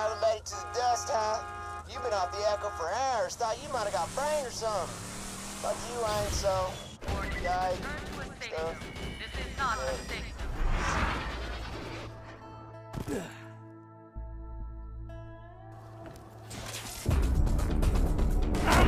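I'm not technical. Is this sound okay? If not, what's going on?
Yes, it sounds fine: nothing is wrong with it, so there's nothing you need to worry about or fix.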